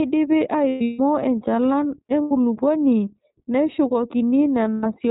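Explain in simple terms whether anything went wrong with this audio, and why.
Yes, two things went wrong. The whole clip went through the iLBC codec, a phone-style codec. It cuts the highs and makes the speech sound rough and synthetic.

There are also lost iLBC frames at 0.69 to 1.00 s, 2.22 to 2.32 s, and 4.76 to 4.84 s. In each gap, the decoder repeats the last sound, so you hear a held, slightly buzzy or breathy vowel before clear speech returns.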